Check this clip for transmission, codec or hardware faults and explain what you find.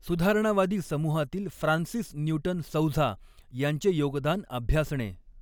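Nothing in the speech signal points to a transmission, codec or hardware problem; it stays continuous and stable throughout, with no audible damage.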